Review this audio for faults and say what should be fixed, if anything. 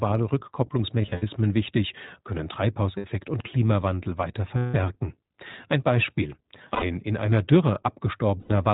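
The whole clip has gone through the iLBC codec, and the damage is easy to hear. Everything above 4 kHz is gone, so the speech sounds narrowband and a bit rough and synthetic. iLBC codes each frame's excitation on its own, and the texture here fits its 20 ms frame mode at around 15 kbps. To avoid it, record or route the call through a wideband codec such as Opus instead of iLBC.

There are also lost iLBC frames at five spots: 1.02 to 1.23 s, 2.98 to 3.06 s, 4.58 to 4.76 s, 6.74 to 6.85 s, and 8.40 to 8.51 s. The dropouts run from 60 ms up to 160 ms. The first one is patchy, with gaps scattered across about 200 ms and no single run much longer than about 70 ms. In each gap the decoder loops the last pitch cycle with some noise mixed in, so you hear a brief held, buzzy vowel. The speech snaps back right afterwards because each frame decodes independently. Fixing the network path, or adding FEC or redundancy and a bigger jitter buffer, would stop these.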